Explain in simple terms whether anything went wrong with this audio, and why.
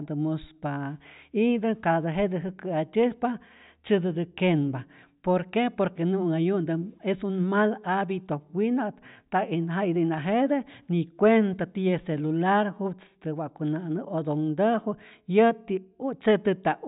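Nothing went wrong here: the speech signal stays technically intact the whole way through, with no fault at any point.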